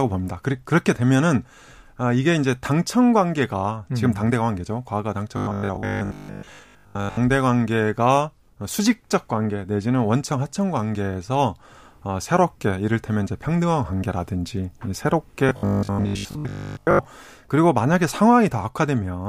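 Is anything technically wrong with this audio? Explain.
Yes. There is robotic sound from repeated short buffers at 5.37–7.17 s and 15.49–17.05 s. The speech turns into a rigid 50 Hz buzz. Likely cause: a 20 ms buffer replayed over and over, covering most of the real audio.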